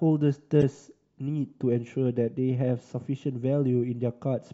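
A speech recording with corrupt decoded frames between 0.61 and 0.63 s. Over those 20 ms a short glitch breaks through the speech, peaking around -10 dBFS. Bit errors in the compressed stream left the decoder with misread gains and codes, yet it still played the data and put energy at frequencies that don't belong to the signal. The length of the burst fits a handful of short codec frames.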